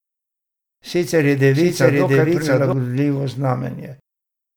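From 1.55 s to 2.73 s a doubled audio track appears: a second, full-band copy of the speech runs roughly 0.7 s behind the original at about the same level. It carries no decay or added room colour, and it cuts in and drops out abruptly at those points. The likely cause is the signal reaching the mix twice, once through a slower capture path or through an edit leaving two misaligned copies.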